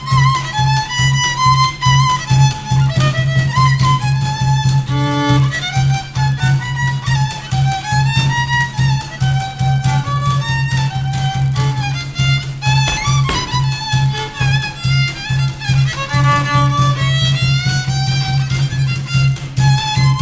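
Throughout the clip, the resampler restarted on every block: the 48 kHz to 16 kHz conversion treated each 20 ms block in isolation, leaving an error at every edge. With blocks this short, the ticks merge into a 50 Hz buzz that rides along whenever sound is present.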